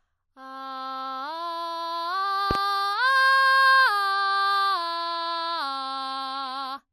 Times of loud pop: 2.51-2.58

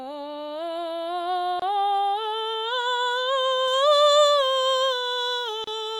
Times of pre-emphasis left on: 3.68-6.00

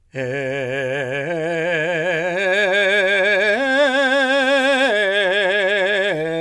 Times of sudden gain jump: none

